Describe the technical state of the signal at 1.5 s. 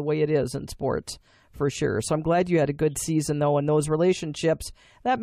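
At 1.5 s the speech signal is intact, with no audible dropout, distortion or other technical fault at that moment.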